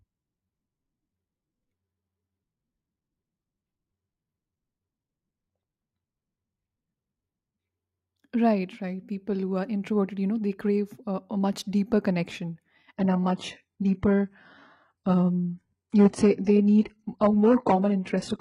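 Speech, with an adaptive stream at a lower bitrate from 12.96 s to the end of the clip. At that point the quality changes abruptly, with no gap in the audio. The treble above 11.1 kHz is gone, and codec artefacts become more noticeable. This suggests the player, after the connection slowed, switched from an AAC-LC rendition around 96 kbit/s to a very low-rate HE-AAC version near 12 kbit/s.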